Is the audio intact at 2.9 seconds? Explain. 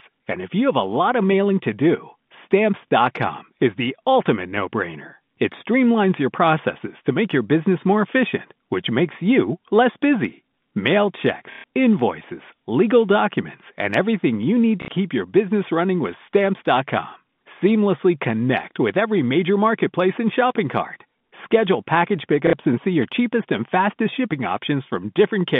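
No. From 2.88 to 2.90 s there is packet loss with the last packet repeated. About 30 ms of audio went missing, which fits a single lost packet, and the receiver filled the gap by replaying the previous packet. The repeat gives a small blip rather than the silent hole a muted dropout would leave.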